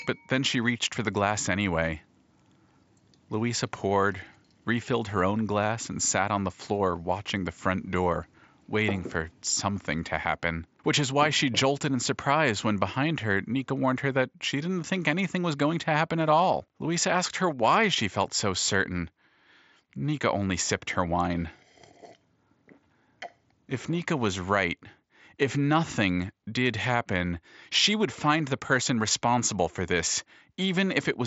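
No technical faults found.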